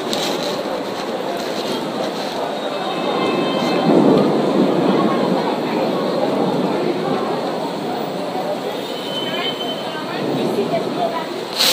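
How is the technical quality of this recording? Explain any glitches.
Nothing glitchy turns up here; the recording runs steadily with no dropouts, clicks or other technical hiccups to point to.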